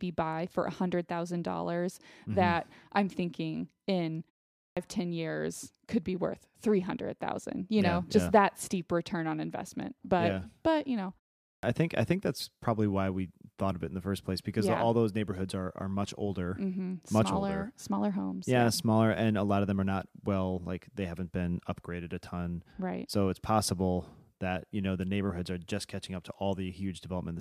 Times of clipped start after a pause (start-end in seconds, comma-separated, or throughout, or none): 4.63-4.77, 11.48-11.63